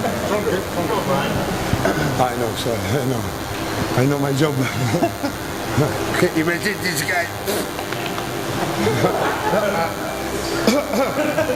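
From start to finish a DECT cordless phone buzz sits under the sound: a nearby handset or base station bursts every 10 ms, and the audio circuitry rectifies those bursts into a thin, steady 100 Hz buzz at roughly 10 dB below the signal. A spectrogram shows an evenly spaced comb of harmonics.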